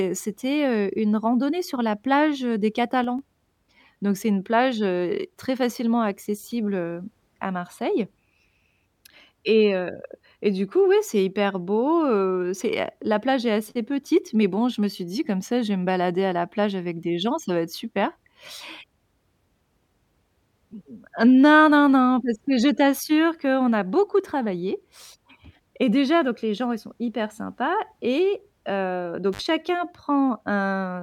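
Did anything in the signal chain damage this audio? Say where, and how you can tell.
Yes. After "la plage heu des", a sudden gain jump from 3.04 to 3.19 s drops speech and background noise together by about 4 dB. That points to a likely unramped digital gain step, not a fade.

After "hyper sympas et heu", an intermittent contact in the analogue wiring opens for 52 ms between 29.33 and 29.41 s. Crackle at the edges and faint residual hiss distinguish it from clean digital dropout.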